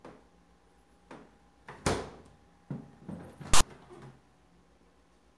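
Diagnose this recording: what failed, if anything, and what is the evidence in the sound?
A storage or file-parsing failure: file tags played as audio. From 3.54 to 3.61 s a hard-edged rasp of static, offset to one side, replaces the audio. Text bytes read as samples produce this lopsided burst, unlike full-scale white noise from corrupted compressed data.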